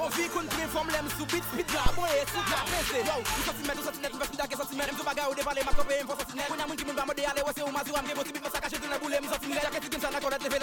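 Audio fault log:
1.86 s and 5.73 s: phantom power thump. Each is a deep low-frequency thump peaking at about -12 and about -13 dBFS, decaying over 56 ms and 32 ms. Supply power switched on or off on a live input sends a voltage step through the coupling capacitors.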